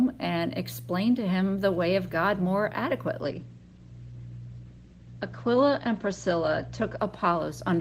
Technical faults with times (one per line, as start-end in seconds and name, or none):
3.23-7.80 call bitrate drop